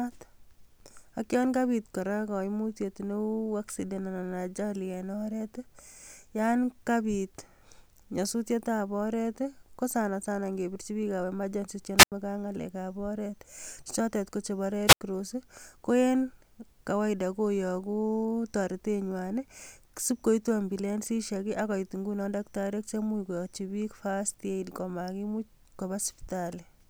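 At 11.97 s the speech breaks up in a wireless microphone squelch dropout. Hiss swells briefly, then the output mutes for about 87 ms. The radio signal has faded below the receiver's squelch threshold. The same happens at 14.87 s, with a mute of about 82 ms.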